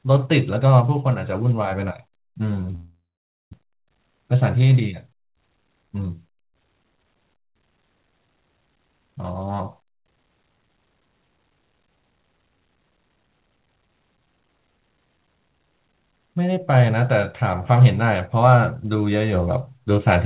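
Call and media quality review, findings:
Long network dropout, 2.75–3.54 s: speech trails off as a fading buzz into silence and resumes with about half a second gone. Likely a run of lost or late packets. The receiver concealed the gap, then muted.

Jitter buffer speed-up, 3.62–5.8 s: speech sounds hurried, 12% faster at unchanged pitch. The buffer overfilled when the delayed audio arrived together. The receiver repeatedly cut pitch-period-length pieces, trimming roughly 300 ms of excess delay.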